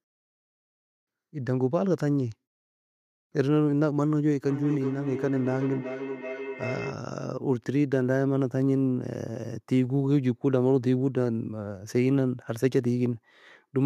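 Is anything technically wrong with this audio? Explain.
Yes. From 4.44 to 7.06 s there is feedback howl. A microphone-to-loudspeaker loop gains level on each pass, so the repeats grow instead of fading and narrow into a tone near 400 Hz. It pulses roughly every 0.4 s and peaks about 10 dB below the speech. A spectrogram shows a bright narrow horizontal band near 400 Hz, and the waveform envelope throbs as it swells.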